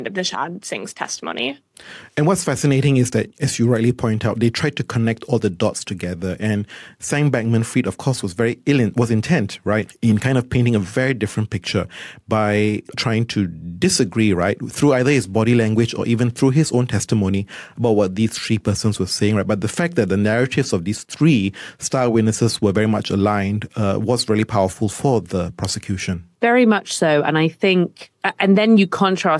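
No technical faults can be heard anywhere in the recording, and the speech signal stays steady and intact throughout.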